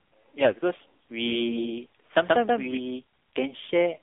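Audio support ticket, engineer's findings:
AMR narrowband mobile codec throughout: band roughly 250 Hz to 3.6 kHz, nothing up top, buzzy synthetic edge audible, fits a low-rate mode around 7.4 kbps.

AMR bit errors at 0.40–0.52 s: short hoarse, gargly patch, pitch and level hold. Weak radio link flipping less-protected bits, excitation pulses landing wrong.

Doubled audio track 1.23–2.77 s: second full-band copy about 150 ms behind at roughly equal level, hard start and stop, no room colour. Likely a parallel slower capture path mixed in.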